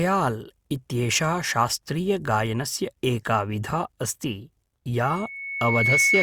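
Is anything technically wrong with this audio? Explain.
Yes. From 5.05 s to the end at 6.22 s there is loudspeaker feedback squeal. The microphone is hearing its own loudspeaker, and around 2.2 kHz the loop gain passes one. That tone swells over about a second into a piercing whistle, ending up somewhat louder than the speech.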